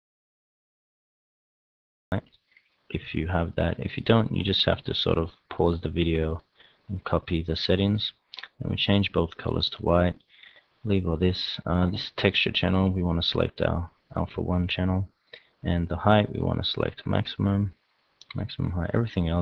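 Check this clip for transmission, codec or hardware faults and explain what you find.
One fault is present. An audio dropout to silence is already under way when the clip opens and lasts from 0.0 to 2.12 s. The input signal was likely lost somewhere upstream, through a disconnected device, a broken link or an accidental mute, while recording carried on storing silence. For those first two seconds there is dead silence with no room tone at all, and then the sound cuts in abruptly, already in progress.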